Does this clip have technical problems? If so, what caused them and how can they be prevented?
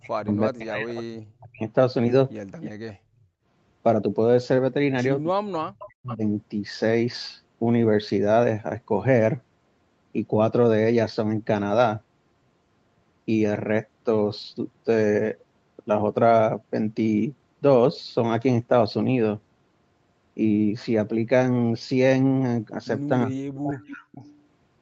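Yes. Three kinds of fault are audible.

Speech suppressed in double talk: from 0.0 to 1.64 s, 5.44 to 6.23 s and 23.25 to 24.11 s, the speech dips sharply, by about 40 dB at worst. This is likely an echo canceller that cannot tell near speech from loudspeaker echo, so it turns both down. Using a canceller with better double-talk detection, or a headset on the far side, prevents it.

Echo leak: a faint delayed copy of the speech returns at 0.28 to 0.36 s, 2.61 to 2.93 s, 5.27 to 6.15 s and 23.87 to 24.28 s. It sits about 15 to 25 dB below the speech, 316 to 419 ms late. This is likely residual loudspeaker pickup that the far end's echo canceller missed. Better acoustic isolation or headphones at that end prevent it.

Background gated by the echo canceller: from 2.97 to 3.46 s, right after the second echo burst, the room sound drops by about 18 dB and then returns. The canceller clamped the microphone hard while the loudspeaker played. 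A gentler suppression setting, or comfort noise to fill the gap, prevents it.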